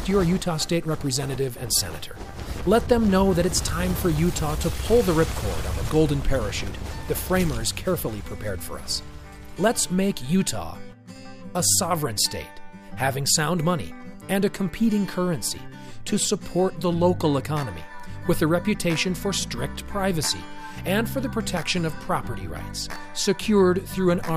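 Nothing here jumps out as a technical problem; the sound just runs along steadily with no glitches or interruptions to point to.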